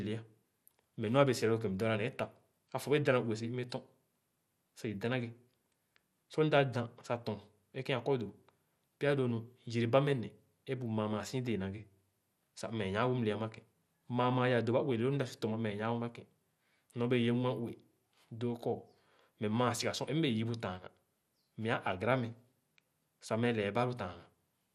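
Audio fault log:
Throughout, MP2 compression: the speech is dull and carries a gurgling, granular roughness, with nothing above 14.3 kHz. The likely cause is MPEG Layer II coding at a rate that fits about 80 kbps, too few bits to keep every sub-band switched on and finely quantised.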